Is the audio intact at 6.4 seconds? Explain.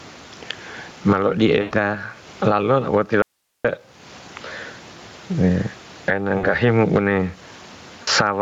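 No. VoIP packet loss concealed by the speech codec covers 6.37 to 6.55 s. About 60 ms of data went missing, consistent with three lost frames. The decoder filled the gap by extrapolating its last pitch and filter while lowering gain, so the sound turns into a fading buzzy, coloured tone and stays weak a little past the gap.

Gain pumping is also present here. The gain swings by around 20 dB, squashing the dynamics. The likely cause is excessive input gain with a fast limiter pulling it back.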